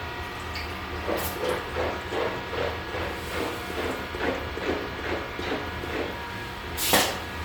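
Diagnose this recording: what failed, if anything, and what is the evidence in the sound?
The fault sits at the codec stage and runs through the whole clip: Bluetooth LC3 compression is the likely cause. The upper spectrum has a breathy, grainy texture where fine detail has been swapped for shaped noise, consistent with 10 ms transform frames. The damage is plainly audible, which fits a bitrate around 48 kbps. The band still extends to about 20.2 kHz, so this is noise-filling within a full bandwidth, not the hard, clean top-end cut of a low sample rate or a band-limited telephone codec.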